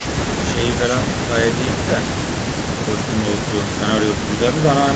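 Nothing stood out on listening to this speech recording.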